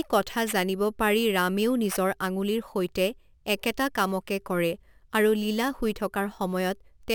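From start to end, the speech carries imaging from sample-and-hold upsampling, which fits a roughly 22 kHz source raised to 44.1 kHz by repeating each sample with no smoothing filter. A mirrored copy of the speech spectrum fills 11.03 to 22.05 kHz at about 21 dB below the signal. It is heard as a bright metallic fizz that rises and falls with the speech, its lowest part moving opposite to the pitch. On a spectrogram, the speech harmonics reappear above 11 kHz, flipped upside down. On a zoomed waveform, the samples form small stair-steps.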